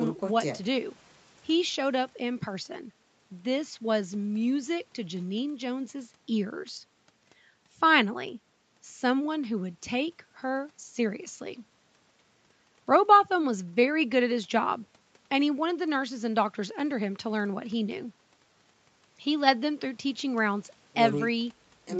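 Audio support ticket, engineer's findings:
No defects found in the speech audio; content stops near 8 kHz and the lowest bass is rolled off, consistent with normal call microphone processing and a wideband Opus call path.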